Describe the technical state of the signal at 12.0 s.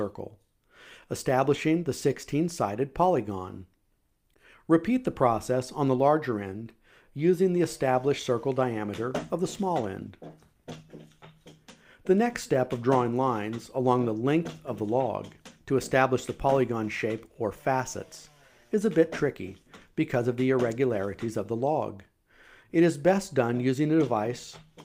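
At 12.0 s the signal is intact, with no dropout, distortion, glitch or other technical fault present at that moment.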